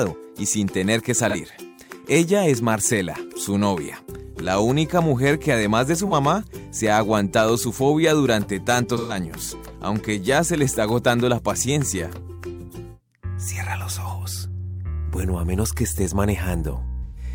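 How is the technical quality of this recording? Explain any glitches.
Four brief glitches come from AAC frame loss with concealment, at 1.29–1.36 s, 6.07–6.13 s, 8.97–9.17 s and 17.03–17.23 s. The decoder filled each gap from the last good spectrum, giving smeared, noisy patches. The first two last about 43 ms, which fits one lost frame, and the last two last 128 ms, which fits three.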